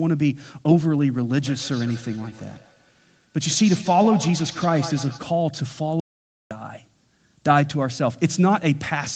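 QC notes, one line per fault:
1.41–5.23 s, feedback echo between two devices. The speech comes back as repeats spaced roughly 150 ms apart, each thinner and more ringing than the last. The loudest repeats sit about 14 dB below the direct speech. Two devices on the same call are sharing a room. One plays out what the other sent, and the other's microphone picks it up again. Each echo canceller removes only its own playback, so the loop survives and keeps recirculating.
6.00–6.51 s, audio dropout to silence. The speech stops mid-flow for about half a second and returns just as abruptly. The gap is dead digital silence with no room tone underneath, heard against the call's 8 kHz band limit. Whatever was said in that half second is simply missing. The input signal was likely lost briefly, from a disconnect, a link failure or a stray mute, while the recorder kept writing silence.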